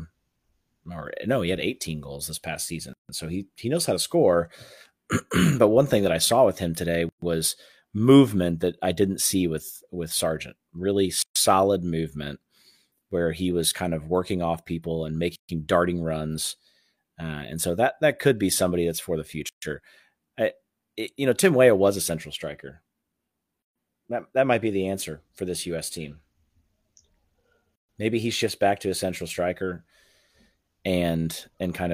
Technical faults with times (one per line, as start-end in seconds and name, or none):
2.93-3.09 gap at a join of encoded pieces
7.09-7.22 gap at a join of encoded pieces
11.22-11.36 gap at a join of encoded pieces
15.36-15.49 gap at a join of encoded pieces
19.49-19.62 gap at a join of encoded pieces
23.62-23.76 gap at a join of encoded pieces
27.76-27.89 gap at a join of encoded pieces